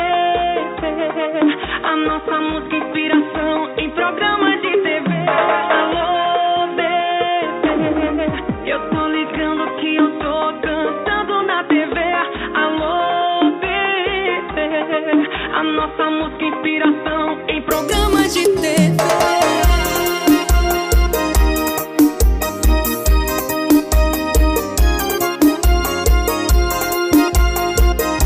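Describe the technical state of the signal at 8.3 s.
At 8.3 s the input has likely been switched to a poorer device, a state running from the start to 17.71 s. Its narrower band cuts everything above 3.8 kHz, leaving the sound dull and boxy, a few dB quieter, over a faint added noise floor.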